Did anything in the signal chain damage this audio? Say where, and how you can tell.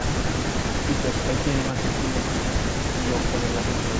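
Yes, in the call processing. From 1.71 to 1.83 s and again at 2.83 to 2.87 s, a copy of the speech trails about 163 ms behind, around 15 dB down, then about 10 dB down. That's an echo leak, likely a loudspeaker-side canceller letting its pickup slip back.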